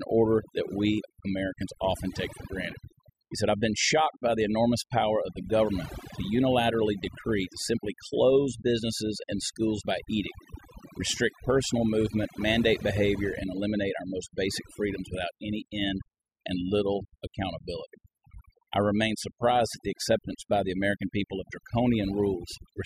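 Overdone noise removal runs through the whole speech clip, from start to finish. A noise reduction stage set far too aggressively is cutting individual frequency bands down or out whenever they sit close to what it takes for the noise floor, and the softer parts of the voice fall below that line too. Between phrases the background drops to near silence scattered with twinkling specks.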